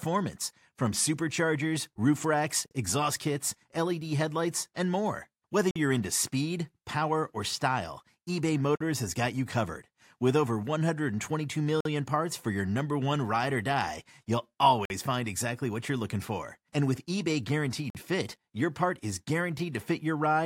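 Hard-edged holes of about 48 ms cut the speech at 2.66, 5.71, 8.76, 11.81, 14.85 and 17.90 s, one every 3 s. Each is a gap between chunks, where silence was inserted at the join between 3-second blocks.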